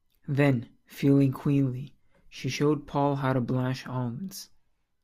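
A short stretch of speech, and there's nothing technically wrong to point to anywhere in it.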